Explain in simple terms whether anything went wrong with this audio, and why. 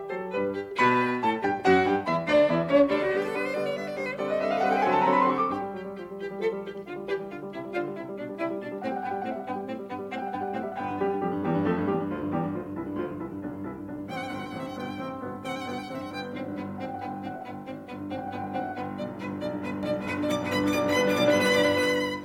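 Something does go wrong near the end. From 19.83 s until the music finishes, you hear a doubled audio track: the same music plays twice, with a second copy trailing about four tenths of a second behind and only a little quieter. It likely comes from the sound being picked up twice or two copies being misaligned in editing. Unlike an echo, the copy never fades or sounds roomy, and it starts abruptly.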